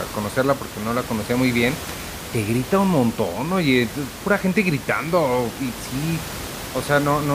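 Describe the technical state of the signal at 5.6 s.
At 5.6 s the speech signal is intact, with only the room's own background noise sitting about 12 dB below the speech.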